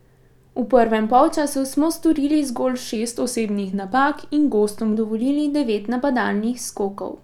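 From 2.96 to 4.94 s the speech slows by about 6.3 percent and drops about 113 cents, just over a semitone, then snaps back to normal. That's likely a drift correction step, where clock-matching software briefly shifted the playback rate to rebalance its buffer.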